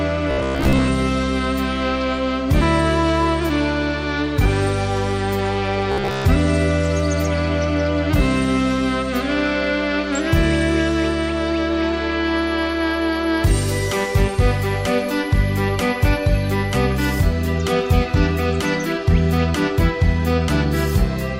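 Two short stretches turn rigid and metallic: 0.31 to 0.88 s and 5.92 to 6.25 s. Both show robotic sound from repeated short buffers, with a fixed buzz at about 66.8 Hz. That rate corresponds to a repeating segment roughly 15 ms long, and around two thirds of each stretch consists of repeats rather than new audio. The likely cause is input arriving too slowly, so the playback side loops its last buffer while the real signal is skipped.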